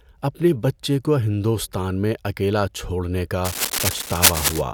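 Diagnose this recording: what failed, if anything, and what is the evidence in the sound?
The analogue wiring let go near the end. Right after "میں اکیلا چھوڑنے", from 3.44 to 4.62 s, there's cable scratch noise: a dense, uneven rustle about as loud as the speech itself. That's most likely a worn cable or connector being moved, its contact resistance jumping around.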